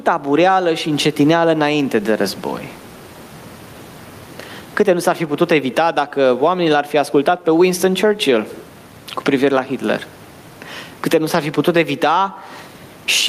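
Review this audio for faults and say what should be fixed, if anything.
Gain pumping runs through the whole speech clip: the room noise, about 38 dB under the voice, swells around 20 dB in pauses and ducks under each loud syllable, likely from gain set far too high with a fast limiter. To prevent it, drop the input gain and ease off the limiter.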